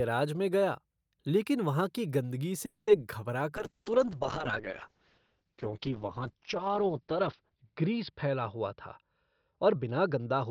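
At 2.65 s the speech stops moving forward and the last sound is held as a fading buzz for about 0.22 s before resuming where it left off, with nothing lost. This is a call audio freeze, likely from packets held up in transit so the jitter buffer ran dry.

From 3.57 s to the end, a call bitrate drop sets in: the encoder falls from 48 kbps to 7 kbps, sitting at the lowest rate for about 4.2 s. Coarser coding makes the speech rough and watery, and bandwidth shrinks from 20 kHz to 6 kHz, muffling it.

Between 9.02 s and 10.45 s a jitter buffer speed-up is audible. With excess audio queued, the receiver repeatedly trims short pitch-period segments, removing around a fifth of a second. The speech runs at about 112% speed with unchanged pitch, sounding hurried.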